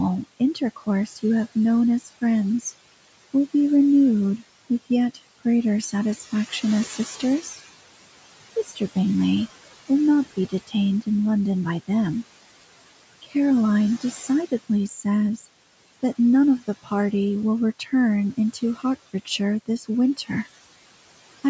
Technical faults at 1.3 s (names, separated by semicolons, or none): noise suppressor artifacts; speech cut by the noise suppressor